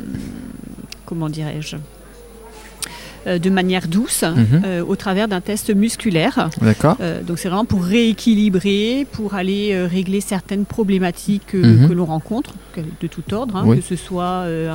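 No technical faults are audible.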